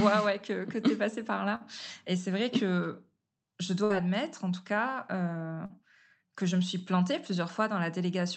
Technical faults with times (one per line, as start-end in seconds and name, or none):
1.55-1.62 burst of packet loss
3.84-3.92 burst of packet loss
5.66-5.72 short concealed packet loss